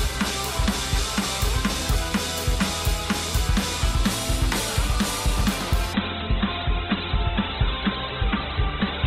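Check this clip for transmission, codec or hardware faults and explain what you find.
One fault: an adaptive stream at a lower bitrate. From 5.93 s to the end, the sound abruptly turns dull, with nothing above 4.2 kHz and no gap. The connection slowed and the player switched versions mid-stream, a drop that fits Opus falling from about 64 to 12 kbit/s.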